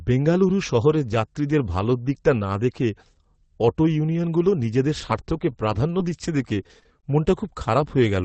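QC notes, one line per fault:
5.09–7.12 s, scattered short gaps: just after "অটো ইউনিয়নগুলো নিজেদের", about seven brief dropouts, none longer than roughly 20 ms, break up this stretch. Packets went missing or arrived late, about 160 ms of audio in all, and the receiver filled each hole by extending the preceding sound, rebuilding 340 ms and adding 28 ms. That concealment is what makes the small ticks, smears and hiccups heard here. The band-limited call-codec sound, cut off above about 8 kHz, continues underneath.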